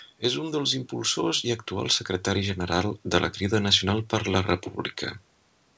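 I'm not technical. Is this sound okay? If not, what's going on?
Yes, the speech comes through in good technical shape, with the slightly narrowed sound of a wideband phone call and only a faint background noise from the room well beneath it.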